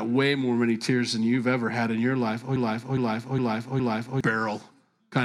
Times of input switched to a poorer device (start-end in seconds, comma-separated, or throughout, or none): none